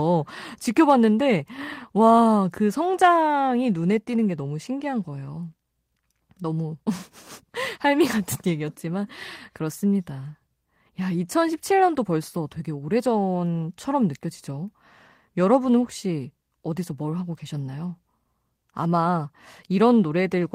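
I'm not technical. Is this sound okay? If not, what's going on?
Yes, it sounds fine: nothing stood out as a problem while listening.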